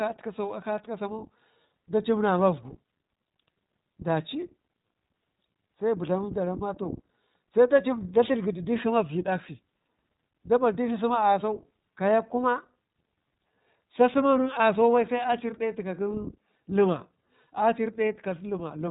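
iLBC codec throughout: each 20 ms frame is coded independently, nothing passes above 3.8 kHz, and the speech sounds plainly rough and synthetic.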